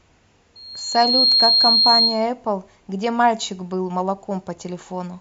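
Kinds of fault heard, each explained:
Loudspeaker feedback squeal: the microphone is picking up the loudspeaker it drives, and at 4.2 kHz the loop gain rises above unity, so that tone reinforces itself. From 0.55 s it swells in under a second to about 10 dB above the speech, stopping at 2.27 s.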